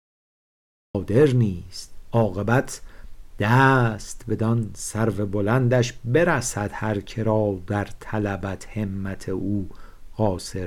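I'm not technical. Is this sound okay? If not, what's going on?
No. For the first 0.95 s there's dead silence, then the sound jumps in mid-stream. It's a cut-off start: the recording began late.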